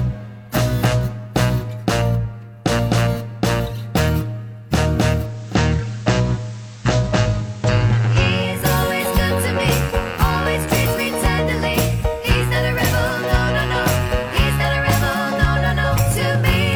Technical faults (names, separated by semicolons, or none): digital radio blending to analogue